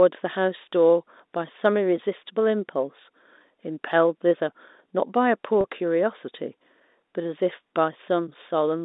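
At 5.61 to 5.64 s, about 30 ms of speech went missing, consistent with a single lost packet, and the receiver concealed it by repeating the last pitch period. This packet loss with pitch repetition sounds like a brief held, slightly buzzy sustain before the telephone-band speech resumes.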